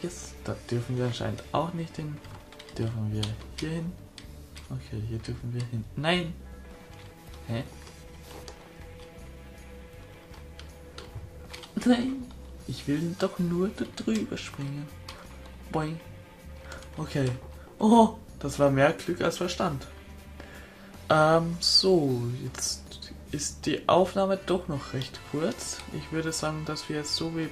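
No technical faults can be heard anywhere in the recording. Nothing in it stands out as a dropout, glitch or distortion at any point.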